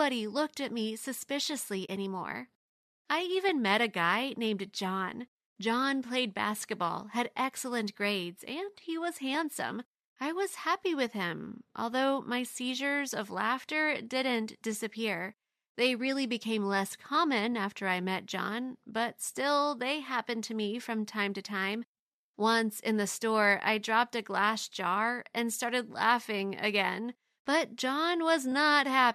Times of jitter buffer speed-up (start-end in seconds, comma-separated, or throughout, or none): none